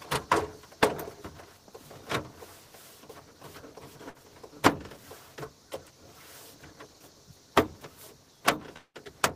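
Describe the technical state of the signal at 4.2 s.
Just before 4.2 s, a burst of packet loss runs from 4.09 to 4.18 s. A short run of audio packets never arrived in time to be played. The receiver covered the gap by holding the last sound it had and turning it down, which gives about 51 ms of fading filler. The sound then picks up again further on. About 60 ms of the original audio is missing, so the return lands with a small jump.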